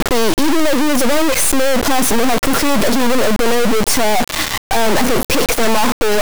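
From the very start and across all of the speech, the sound is an extremely loud, harsh buzzing square wave, snapping between silence and the clipping limit and dropping out entirely in the quietest moments. This is integer read as float: samples stored as 32-bit integers are being interpreted as 32-bit floating-point values. Most bit patterns then decode to numbers either vanishingly close to zero or far beyond full scale, so the output slams between nothing and maximum level.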